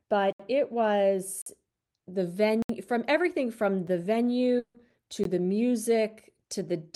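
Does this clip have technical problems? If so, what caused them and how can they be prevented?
Yes. The speech cuts abruptly out and back at 0.33 to 0.40 s, 1.42 to 1.46 s, 2.62 to 2.69 s, 3.87 s (heard as a tick, since that gap is only about 5 ms) and 5.24 s. These are blocks of digital silence: stretches of zeros between about 5 and 70 ms long, likely where the output buffer wasn't filled in time. The 46 ms gap fits a 2048-sample buffer. Prevent it by giving the audio thread priority and using a larger buffer.

From 4.59 to 4.76 s, the sound smears into a fading buzz for about 160 ms, then briefly goes silent before speech resumes with part of it missing. This is likely a long network dropout, with the receiver stretching the last audio to conceal it. Prevent it with a steadier connection and a deeper jitter buffer.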